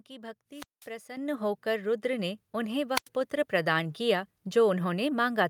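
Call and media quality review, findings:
Level jumps abruptly, speech and background together, at 1.17 s (about 9 dB) and again at 3.21 s (about 2 dB). Microphone volume stepped up: call software's input gain control judged mic too quiet, raised device capture volume in single steps.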